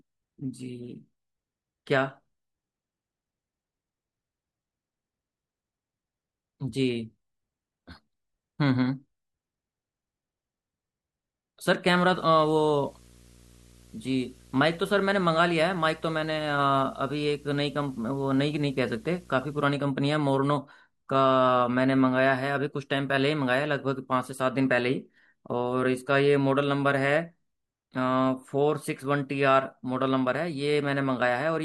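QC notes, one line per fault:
11.89 to 19.65 s, video or display buzz: a screen or video cable is leaking into the audio, giving a 59.94 Hz field-rate buzz with hash over it and a thin 15.7 kHz line-scan whine, sitting roughly 20 dB under the speech.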